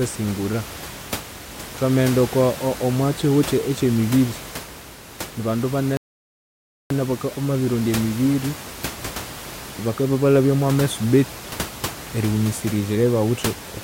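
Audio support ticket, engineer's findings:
Rebuffering stall, 5.97 to 6.90 s: speech halts into silence for about 0.93 s, then resumes at the exact point it stopped. Playback buffer ran dry awaiting download. Unlike a dropout, no audio lost, only time added. Room noise, about 13 dB below speech, continues under it.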